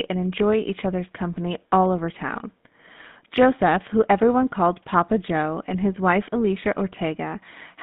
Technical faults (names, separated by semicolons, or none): GSM full-rate codec